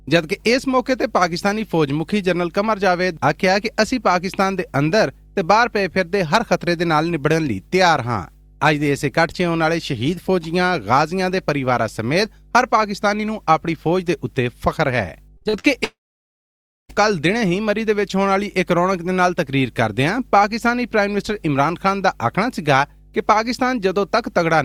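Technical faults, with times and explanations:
Throughout: mains hum. A steady low tone at 50 Hz sits under the whole clip, around 30 dB below the wanted sound, with some of its low harmonics. Power-line current has leaked into the signal path, through a ground loop or the field of a nearby transformer, and the hum is picked up and recorded along with everything else. Because the interference comes from the supply rather than the source, its pitch and level stay fixed from start to finish.
15.37–15.66 s: repeated packet loss (robotic sound). In under a third of a second the stream breaks four times, the longest hole lasting 48 ms, and about half of the stretch is covered by patched-in sound rather than real audio. At each hole the receiver extends the last fragment it had, then the next hole arrives almost at once. The stacked, looped fragments give a choppy texture with small pieces of the sound simply gone.
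15.84–16.91 s: long network dropout. Shortly after the choppy passage, the sound carries on briefly as a fading smear of the last sound, then gives way to silence lasting almost a second, and resumes at about 16.91 s with roughly a second of material skipped. This is likely a network outage in which nothing reached the receiver. It stretched the last received audio for a moment, then stopped, so the lost portion was never played.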